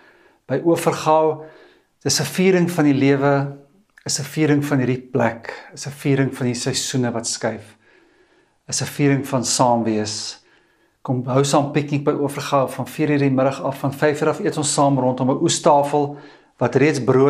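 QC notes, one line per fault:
7.09–10.67 s and 14.61–17.06 s, Bluetooth SBC bit pool drop: the top end goes dull and a gritty, grainy noise rises under the sound, then clears. The link likely congested and the sender cut its bit pool, starving the upper sub-bands and coarsening the rest. The sound fits a fall from 31 to 14, near 99 kbps.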